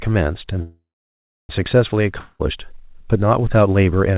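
At 0.62 s there's a call audio freeze. The last bit of speech smears into a fading buzz, and then there's roughly 0.68 s of silence before the speech picks up again at 1.51 s, right where it stopped. Nothing is skipped. Everything after that point just lands about 0.87 s later than it should. That's most likely packets stalling in transit and the jitter buffer running dry while the receiver waits.

The second problem is a long network dropout from 2.20 to 2.41 s. Here the sound again gets stretched into a short buzzy tail lasting about 0.19 s, but it never falls to silence. When the speech comes back, it has jumped ahead, and about 0.2 s of it is simply gone. The likely cause is a run of packets that never made it through. Both gaps sit inside the narrow G.711 mu-law call sound, with nothing above 4 kHz.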